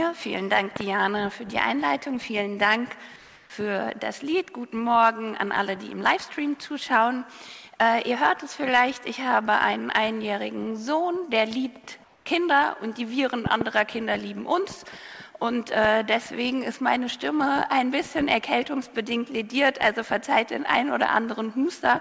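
A voltage pulse, likely from a switch or static, was added to the signal at 0.76–0.83 s, heard as a loud pop in two quick bursts about 15 dB above the sound, which carries on beneath. The same double pop returns at 13.46–13.64 s.

At 3.16–3.50 s, the sender likely stopped transmitting during a detected pause, and the receiver filled the gap with comfort noise in place of the background. For 340 ms the real background becomes a flat, featureless hiss about 2 dB quieter. A 220 ms stretch at 12.04–12.26 s repeats this with no change in level, within a call path that carries nothing above 8 kHz.

At 15.85–15.87 s a single loud pop, again about 15 dB above the sound, likely comes from another such pulse.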